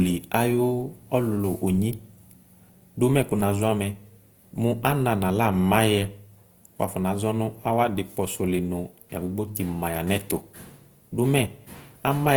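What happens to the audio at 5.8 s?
At 5.8 s the speech carries audible Opus compression damage, present throughout the clip. The sound is grainy and rough, with a noisy edge on tones. That fits a low bitrate, around 24 kbps, where the likely cause is the encoder filling starved bands with folded or noise content while the bandwidth still reaches about 20.2 kHz.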